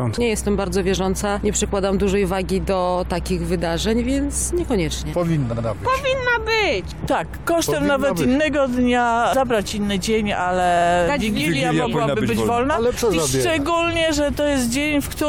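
At 5.52 s there's a stutter from repeated frames: a 69.7 ms chunk of compressed audio, which fits about three frames, gets played two extra times, so the sound hiccups until 5.65 s and the clip runs 139.3 ms longer. The same thing happens at 10.76 s, this time with a 46.4 ms block, likely two frames, repeated twice more up to 10.86 s, adding 92.9 ms.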